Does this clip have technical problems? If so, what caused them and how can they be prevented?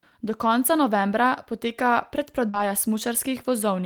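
Yes. Short concealed packet loss runs from 2.49 to 2.55 s. About 40 ms of the call arrived too late for the decoder, which bridged the hole by extending the preceding sound and then blending back, leaving a brief smear in the speech. A larger jitter buffer or a more stable network path would prevent it.

Right after, from 2.53 to 2.59 s, a lost packet rebuilt from error correction fills another 40 ms. That fits two 20 ms packets recovered from low-bitrate copies sent in the following packets, so there is no gap, but the sound turns rougher and noisier. Reducing packet loss on the link, or giving the error-correction copies more bitrate, would prevent it.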